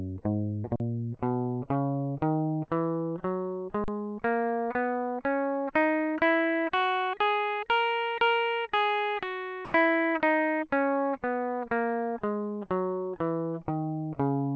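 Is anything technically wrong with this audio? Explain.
Yes. This music clip has two kinds of fault.

At 0.76 to 0.80 s and again at 3.84 to 3.88 s, there is an underrun with a held sample. Each time, the output buffer ran dry for 40 ms. The converter froze on its last value. The waveform goes flat and the music stops abruptly. Roughly 40 ms of live audio is lost each time.

From 9.65 to 9.74 s, the music gives way to steady comfort noise for 90 ms, and about 60 ms of it is missing. The likely cause is sound dropped by the voice detector. The sender's detector mistook this passage for background and stopped transmitting until it triggered again.

Throughout the clip, the call codec leaves nothing above 8 kHz.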